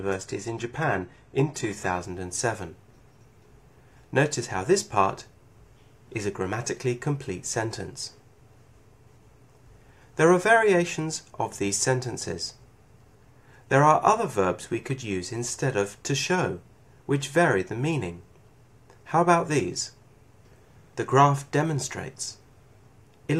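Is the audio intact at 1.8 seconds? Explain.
No. At 1.8 s the treble sounds thin and synthetic, with strong codec smearing, until the sudden gapless lift at 2.0 s. This is an adaptive stream starting at a low bitrate, which fits an HE-AAC stream at about 16 kbit/s before the player steps up.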